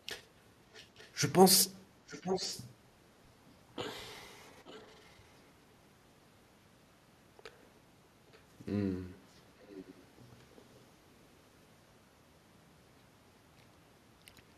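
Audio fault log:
0.73–1.11 s, 2.07–2.67 s, 4.65–5.16 s, 8.33–8.39 s, 9.62–10.04 s: echo leak. A delayed copy of the speech trails in, always about 0.88 s behind the original. It is strongest at 2.07 s, only around 10 dB under the voice, and elsewhere sits roughly 25 to 35 dB down, just a brief scrap at 8.33 s. One side's echo canceller likely failed to remove its loudspeaker pickup, sending part of it back.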